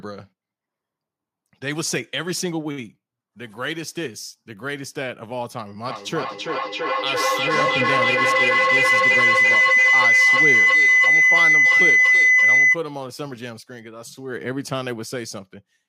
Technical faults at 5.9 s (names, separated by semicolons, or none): feedback howl